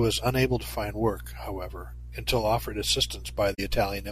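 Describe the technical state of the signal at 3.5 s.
At 3.54 to 3.60 s there is a concealed corrupt frame: damaged AAC data was detected by the decoder, which filled the gap itself over about 58 ms, spanning two frames.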